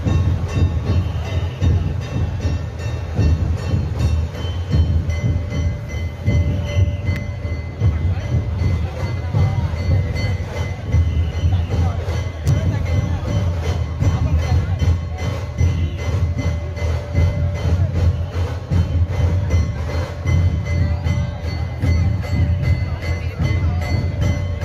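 Two sharp snaps sit on top of the sound at 7.16 s and 12.48 s, each an electrical switching spike, likely from a nearby switch arcing into the line. They show as thin full-height spectrogram stripes and narrow waveform spikes, peaking at about -15 and -10 dBFS.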